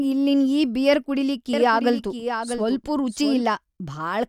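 Speech carries a doubled audio track from 1.53 to 3.43 s: a full-band copy trails about 0.7 s behind, roughly 10 dB quieter, starting and stopping abruptly. Unlike an echo, it has no decay or room colour, likely from a second, slower capture path.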